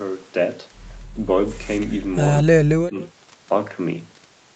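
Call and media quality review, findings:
Speech drops by about 40 dB, 2.43–2.98 s; speech suppressed in double talk, likely echo canceller attenuating near talker during overlap.

Faint delayed copy of speech, about 25 dB down, 3.03–3.08 s; echo leak, 168 ms delay, likely residual loudspeaker echo passing the far-end canceller.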